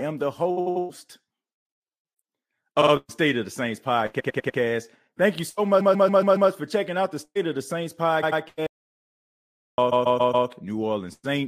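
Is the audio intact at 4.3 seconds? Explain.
No. From 4.19 to 4.58 s the speech stutters, the same 99 ms fragment playing four extra times. This is repeated frames: a run of compressed frames was decoded repeatedly, adding about 395 ms.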